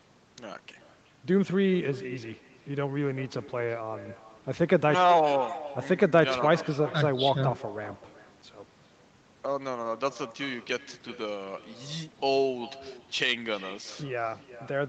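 Speech, with an echo with no canceller running through the whole clip: each phrase comes back as a delayed copy at about 16 dB below the direct speech, trailing it by roughly 0.4 s. That delay is the round trip through the network. The far end played the call over a loudspeaker, its microphone picked it up, and no echo canceller removed it before it returned. The audio's band ends at 8 kHz, which fits an Opus call path.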